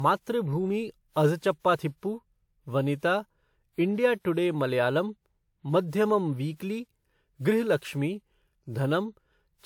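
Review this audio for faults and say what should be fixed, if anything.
Throughout the speech, the sound has a swirly, hollow quality, with consonant attacks smeared rather than crisp, even though the bandwidth reaches up to about 20.1 kHz. That mix of full bandwidth with grainy, washed-out detail likely comes from generation loss: the audio seems to have been through a lossy codec, WMA at around 128 kbit/s, about four times. Each pass re-quantised on a shifted frame grid, stacking noise. To prevent it, keep working copies in a lossless format and encode to a lossy codec only once, at final delivery.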